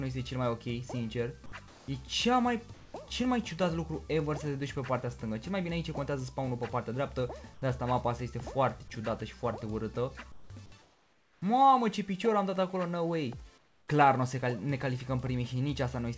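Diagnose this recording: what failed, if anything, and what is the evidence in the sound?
Call processing is the first culprit: sound dropped by the voice detector at 1.68 to 1.88 s. For 200 ms the audio gives way to a flat noise bed, and roughly 80 ms of real sound is missing before it comes back. That pattern suggests the sender's detector likely mistook quiet sound for background, stopped transmitting, and the receiver filled the gap with synthetic noise until the detector caught up.

Same stage, different symptom: comfort noise in place of the background, five times. It occurs at 2.74 to 2.94 s, 7.54 to 7.62 s, 10.32 to 10.50 s, 10.82 to 11.42 s (the longest at 600 ms), and 13.58 to 13.88 s. In each pause the real background, which sits about 24 to 33 dB below the loud parts, turns into a smooth, featureless hiss about 2 to 8 dB quieter. That is likely discontinuous transmission, with the receiver generating noise from occasional level updates.

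Then there's one electrical switching spike at 12.55 s, a sharp snap lasting only about 3 ms and sitting on top of the audio. That points to the analogue side, likely a nearby switch or static discharge arcing into the line. It's unrelated to the call processing, and the whole call path, with its band limit at 8 kHz that fits a wideband codec like G.722, shapes everything else.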